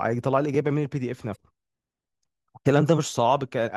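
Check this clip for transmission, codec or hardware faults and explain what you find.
Damaged data in a compressed stream, from 1.32 to 1.37 s: a short stretch of the encoded speech was corrupted, so the decoder misread those frames, lost its place in the bitstream and hunted forward for the next valid frame header before resuming. The result is a brief glitch lasting about 40 ms, where the speech is disrupted before normal decoding picks up again.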